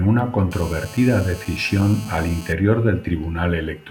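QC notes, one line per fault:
0.52–2.53 s, GSM phone buzz: steady, raspy 217 Hz buzz with harmonics, about 19 dB below the speech. The audio circuit rectifies bursts from a nearby 2G phone call.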